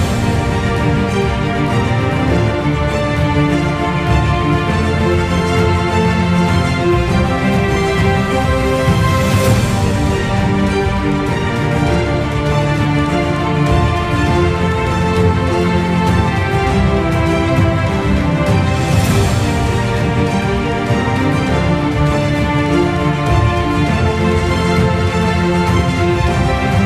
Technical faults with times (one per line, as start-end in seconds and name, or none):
none